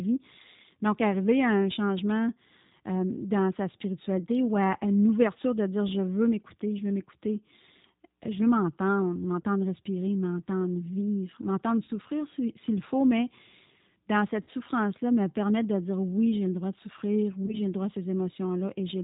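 What you've got here is speech, and the whole thing carries the rough, slightly synthetic sheen of G.729, which fits an 8 kbit/s G.729A stream. The decoder rebuilds each 10 ms frame from a vocal tract filter, a pitch predictor and a handful of pulses, so nothing survives above 4 kHz and the voice comes out plainly band-limited and a bit gritty. On top of that there's VoIP packet loss concealed by the speech codec, four times. At 9.42 to 9.47 s, just after "veux m'entendre", about 20 ms went missing. At 11.84 to 11.91 s, after "respirer m'entendre vivre m'entendre" and before "s'il faut mais", about 40 ms was lost, and another 40 ms went at 14.43 to 14.51 s. At 17.46 to 17.58 s, between "le droit de souffrir" and "le droit à", about 20 ms dropped out. Each time, the decoder kept repeating its last pitch and filter at falling gain, which gives a brief stretched, fading buzz or coloured noise. 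Because every frame leans on the one before, the voice stays weak or distorted for tens of milliseconds or more after the audio resumes.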